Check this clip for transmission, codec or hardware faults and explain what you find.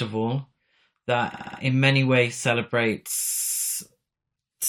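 Two kinds of fault are present: a channel delay causing comb filtering in the first part of the clip, and two stretches of repeated frames.

Channel delay (comb filtering), 0.00 to 2.88 s: one channel lags the other by only a couple of samples, a few hundredths of a millisecond. When the channels are summed to mono, the shared content cancels at evenly spaced frequencies, with the first notch around 10 kHz. Because that notch sits high, the speech loses its air and top-end detail and sounds slightly dull rather than hollow or phasey.

Repeated frames, 1.33 to 1.59 s and 3.27 to 3.70 s: a block of compressed audio was delivered more than once, and the decoder played the same segment again. At 1.33 s a 64 ms block plays four extra times, adding 256 ms, which points to a run of about three frames. At 3.27 s a block of about 107 ms plays four extra times, adding about 427 ms. Both are heard as a mechanical stutter in the speech, and the clip runs longer by the duplicated time.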